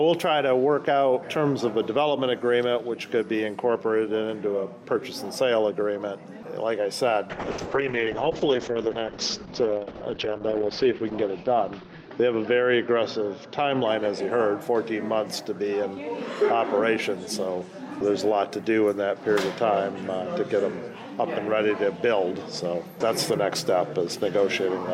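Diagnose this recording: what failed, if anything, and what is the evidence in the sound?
Call bitrate drop at the codec stage, 7.3 to 15.19 s. Bandwidth narrows from 20 kHz to 8 kHz and the sound turns rough and watery, worst for 3.57 s. This points to a fall from about 128 kbps to 7 kbps. Unlike packet loss, there are no gaps, only continuous coarsening.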